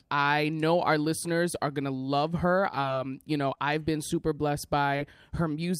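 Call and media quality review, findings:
Short concealed packet loss at 2.81–2.85 s, 3.55–3.58 s and 4.96–5.01 s: brief smear or wobble in speech. Receiver jitter buffer or decoder concealment extends the last sound over each missing 20 ms packet. It is a filled smear, not a silent dropout.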